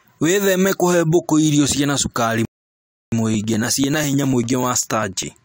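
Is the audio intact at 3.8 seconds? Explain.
No. At 3.8 seconds the speech is inside a run of periodic USB or driver dropouts lasting from 3.34 to 5.33 s. Every 0.099 s, about ten times a second, something stalls the USB bus or audio driver, and roughly a millisecond of audio is skipped outright, leaving a tiny splice in the waveform. Around twenty of these evenly spaced gaps produce a regular ticking that is audible only while speech is present.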